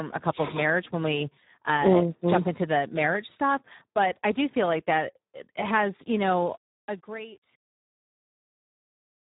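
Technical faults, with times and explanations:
Throughout: Speex codec. The speech sounds hoarse, buzzy and grainy, with a rasping edge, and nothing above 3.8 kHz, so it is dull and boxed-in. The damage is heavy, which fits a Speex stream at about 8 kbps. At that rate the CELP coder has very few bits to describe the excitation that drives its vocal-tract filter. The fine structure of the voice is replaced by a coarse, noisy approximation, giving it a rough, half-synthetic texture.
6.57–9.32 s: truncation distortion on a fade. Right after "that has you know", the level starts a fade-out that runs from about 6.57 s to 9.33 s. As the level sinks, the sound turns gritty and crackly. From 7.02 s to the end it is at its worst. The fade was computed with too few bits and no dither, which fits a 9-bit stage. As the waveform shrinks toward the smallest step it collapses into a few coarse square steps.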